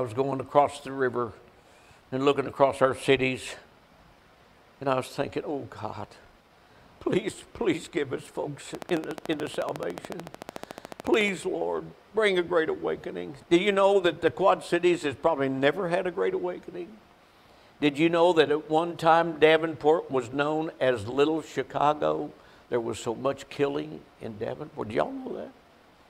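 From 8.75 to 11.29 s a train of clicks ticks over the sound at a steady 13.8 per second, about forty in all, peaking around 10 dB above the signal. Likely interference pulses; a spectrogram shows evenly spaced thin vertical broadband lines, the waveform matching sharp spikes.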